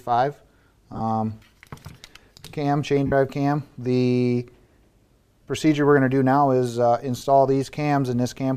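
Lost LE Audio frames at 0.93–1.01 s (about 60 ms lost, longest run around 40 ms), 3.07–3.12 s, 5.43–5.47 s and 7.17–7.22 s. The decoder refills each gap with sign-scrambled repeated spectrum, so tones briefly smear into noise.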